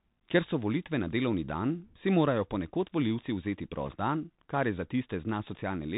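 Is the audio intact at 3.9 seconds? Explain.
No. Between 3.86 and 3.95 s the Bluetooth voice link suffers bit errors, with roughly one or two bits in a hundred arriving flipped. Because each CVSD bit nudges the waveform by only a small step, the errors cause no loud clicks, just a brief rushing crackle laid over the speech.

That burst sits on top of the Bluetooth CVSD headset codec, which fits a 64 kbps narrowband stream. Its one-bit up-or-down coding and adapting step cut everything above 4 kHz. The audible damage is scratchy sibilants, distortion on loud bright sounds, and a grainy hiss beneath the speech.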